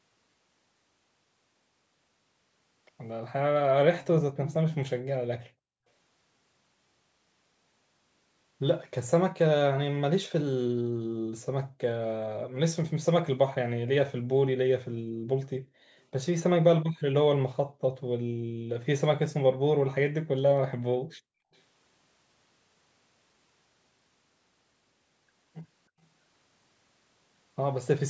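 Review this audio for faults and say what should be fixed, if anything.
Background gated by the echo canceller at 5.49–5.86, 10.92–11.32, 11.69–11.78, 14.97–15.96, 17.66–18.70 and 20.99–21.51 s. While far-end audio played, suppression pulled the room sound down about 40 dB, then released. Prevent it by tuning the echo canceller toward less aggressive residual suppression, or by adding comfort noise during suppression.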